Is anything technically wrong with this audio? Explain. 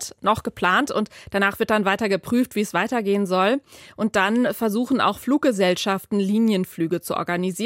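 No, nothing technically wrong can be heard in this audio.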